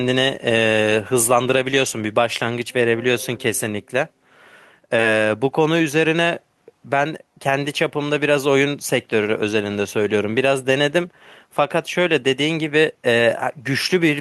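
Speech, with gain pumping throughout. The gain ducks under each loud syllable, swinging about 5 dB. Loud and quiet passages sit close in level, so the sound is squashed. The likely cause is input gain set far too high, with a fast limiter pulling it down.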